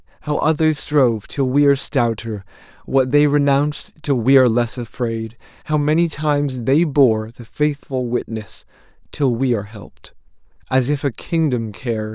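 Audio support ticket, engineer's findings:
No faults heard on this one, the speech comes through with nothing in it that points to a problem in the chain.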